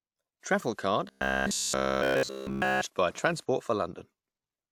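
From 1.08 to 2.83 s the speech turns into a rigid metallic buzz near 66.7 Hz: robotic sound, likely from one 15 ms buffer being repeated throughout.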